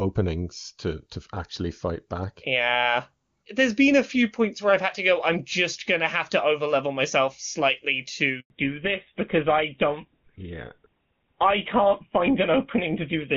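Speech carried over a phone call, with two faults. At 8.40 s, right after "to overlevel myself slightly", a handover gap cuts the sound for 100 ms, until 8.50 s. The call is switching networks, and no speech frames arrive during the changeover. The sound dies away and returns only once the new link is up. Whatever was said in that gap is lost. From 8.50 s to the end, there is a fallback to narrowband. Before the gap, the clear wideband sound fits HD Voice at a high AMR-WB rate such as 23.85 kbit/s. Afterwards, nothing above 4 kHz remains. The sound turns duller and rougher, which points to the older GSM full-rate codec.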